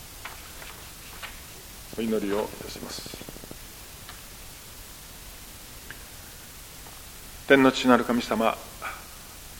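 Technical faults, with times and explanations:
1.93–3.52 s, train of clicks: a regular ticking at 13.3 clicks per second, around twenty near-identical pulses standing roughly 5 dB above the sound, likely interference or a faulty connection or power supply. The waveform shows evenly spaced sharp spikes; the spectrogram shows thin vertical broadband lines.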